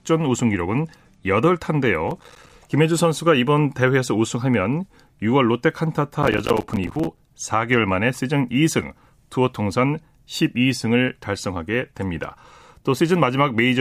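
From 2.08 to 2.53 s and again from 6.23 to 7.19 s, processor overload crackle tears through the speech. Roughly 20 and then 40 tiny silent gaps, each around 5 ms, cluster into a gritty burst. Unlike a single dropout, it is a rapid, hard-edged stutter that ends abruptly.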